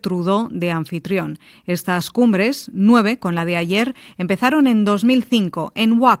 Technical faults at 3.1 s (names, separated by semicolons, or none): none